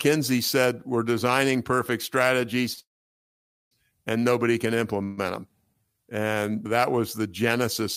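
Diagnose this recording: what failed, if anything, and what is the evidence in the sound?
The first fault is a short stall from a late packet at the network and jitter-buffer stage, at 2.73 to 2.79 s, just before "and nobody can". The sound in progress is held for about 38 ms with a slight buzz or dip. A packet missed its playout time, the buffer ran dry, and the receiver extended the last sound until the packet arrived. Playback then resumed from the same point, so nothing is lost, but the audio runs about 38 ms later from there on.

Two call audio freezes follow, also at the network stage. The first runs from 2.81 to 3.73 s, again before "and nobody can". The last sound decays into near-silence lasting about 0.87 s, and the whole 0.9 s is inserted. The second, at 5.03 to 5.19 s, just after "and nobody can", is a 142 ms concealment buzz or hiss with no silent stretch. In both cases the likely cause is packets held up in transit and an empty jitter buffer, followed by a resume from where the audio stopped.

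A jitter buffer slow-down appears at 5.74 to 5.94 s. The audio plays at about 83% speed with the pitch unchanged. Sounds are drawn out, adding 45 ms in total. With the buffer running low or its target delay just raised, the receiver rebuilt its reserve by repeating single pitch periods in succession, which stretches time without shifting pitch.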